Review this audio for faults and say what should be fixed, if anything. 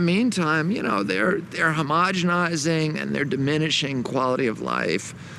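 Nothing here needs fixing; no faults were found.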